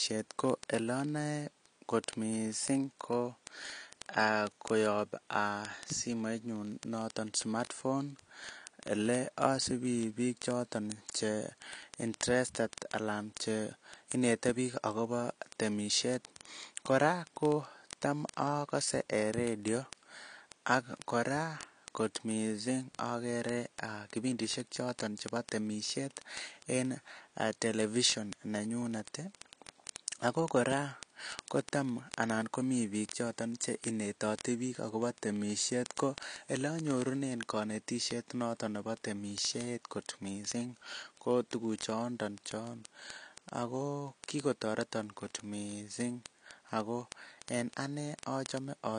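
Speech throughout, with plainly audible codec damage that is likely AAC compression: the sound is dull and smeared, with warbly, fizzy sibilants, and a spectrogram shows nothing above 10.1 kHz, a hard ceiling, which fits a low bitrate around 32 kbps. Word clock ticks run from 0.11 s to 48.98 s, a sharp click roughly every 20 ms, some two thousand in all, each a single dropped or repeated sample where two unlocked clocks drift apart by around 0.1%. On the waveform they appear as evenly spaced one-sample spikes, and on the spectrogram as thin vertical lines.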